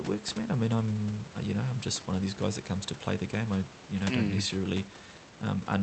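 No technical faults can be heard anywhere in this recording.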